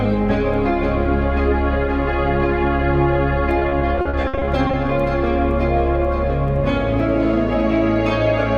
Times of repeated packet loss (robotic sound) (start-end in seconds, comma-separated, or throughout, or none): 3.59-4.75